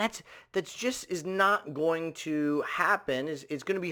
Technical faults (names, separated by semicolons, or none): crude rate conversion